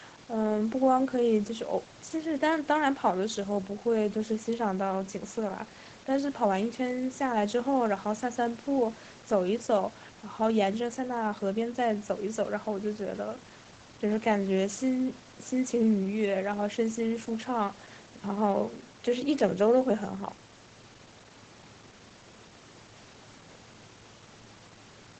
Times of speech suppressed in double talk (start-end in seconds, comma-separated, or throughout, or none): none